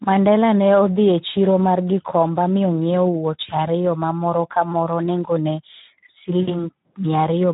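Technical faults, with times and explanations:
Throughout: Speex codec. The speech has a plainly audible hoarse, noisy quality. With few bits left to code the excitation, the fine harmonic detail is replaced by a coarse approximation, which fits a Speex setting around 11 kbps. On a spectrogram, the harmonics look smeared and grainy rather than as clean striations. Any energy above 4 kHz appears as a smooth, noise-like wash without structure. In the waveform, the periodic voiced cycles look rougher than normal.
6.41 to 6.55 s: VoIP packet loss concealed by the speech codec. About 60 ms of audio went missing, which points to roughly three lost 20 ms frames. The decoder filled the gap by repeating its last pitch and filter settings with falling gain. The result is a short stretched sound that fades instead of continuing the speech, and the sound stays weak for a moment afterward as the decoder recovers. 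A spectrogram shows the stretched sound fading across the gap, and the waveform shows a decaying segment.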